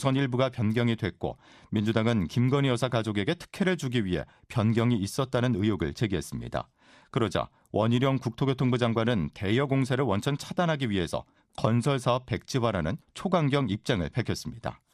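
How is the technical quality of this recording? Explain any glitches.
The speech is clearly degraded throughout by MP2 compression: a dull, gurgling graininess that points to a low rate near 80 kbps. Upper sub-bands flicker off and the rest are coarsely quantised. That flicker separates it from a fixed low-pass, and it is likely the cause.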